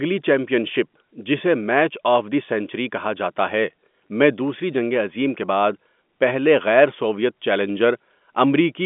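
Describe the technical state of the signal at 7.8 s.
At 7.8 s the speech is intact, carried on a G.711 telephone path whose band stops near 3.7 kHz, with no dropout, click or other fault at that moment.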